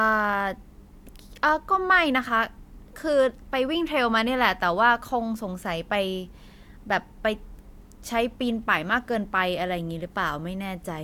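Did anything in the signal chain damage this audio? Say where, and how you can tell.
No, nothing in the chain audibly damaged this speech.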